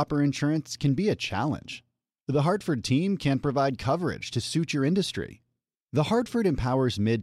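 Speech throughout, with no technical fault audible anywhere in the recording.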